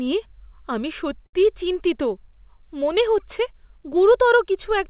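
At 1.26 s, right after "নিয়ে আমি", the sound hangs for a moment, held about 72 ms too long with a faint buzzy smear, then resumes at 1.35 s. This is a short stall from a late packet. The jitter buffer ran dry, so the receiver stretched the last audio until the data arrived. Nothing was lost, but everything after it now plays 72 ms later. The call path's 4 kHz ceiling, consistent with G.711 A-law, is audible throughout.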